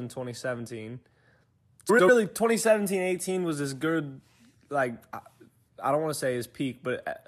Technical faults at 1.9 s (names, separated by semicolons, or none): frames out of order